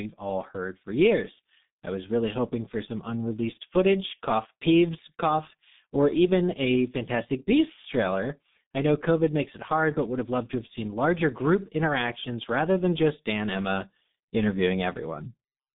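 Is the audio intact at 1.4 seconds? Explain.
No. At 1.4 seconds, as across the whole clip, the speech has passed through the G.723.1 codec, apparently at a low rate around 6 kbit/s, squeezing it into a telephone band of roughly 150 Hz to 3.7 kHz, with nothing above 3.8 kHz. Heavy coding damage leaves it muffled and hoarse, with smeared consonants.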